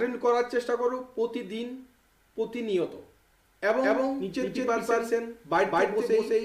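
Audio with a doubled audio track from 3.82 s to the end: a full-band copy follows about 200 ms behind at similar level, likely from a second, slower capture path.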